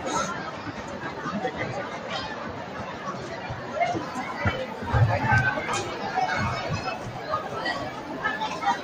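Throughout, held sound and its tails dip and flutter by roughly 5 dB while attacks pass, the pumping of a noise suppressor applied to music or sounds.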